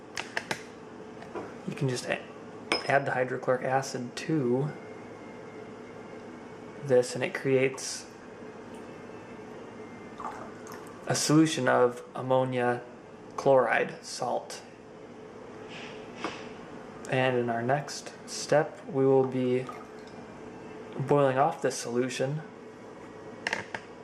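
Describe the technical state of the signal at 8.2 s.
At 8.23 to 8.25 s the signal has lost LE Audio frames: about 20 ms of audio never arrived, which fits two 10 ms LC3 frames. The decoder filled the gap by reusing the last good spectrum with randomised signs, so anything tonal turns into a brief noisy smear. On a spectrogram the harmonic lines blur into a short vertical band of diffuse energy. On the waveform the periodic shape breaks into irregular, noise-like samples for that instant.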